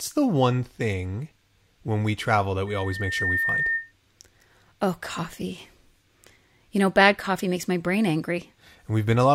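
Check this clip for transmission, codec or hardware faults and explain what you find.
One hardware fault shows up: loudspeaker feedback squeal from 2.67 to 3.92 s. A microphone is hearing the loudspeaker it feeds, and at 1.8 kHz the loop gain tops one, so that tone builds over a bit under a second until it is about as loud as the speech. A spectrogram shows one bright horizontal line at 1.8 kHz, and the waveform envelope swells steadily.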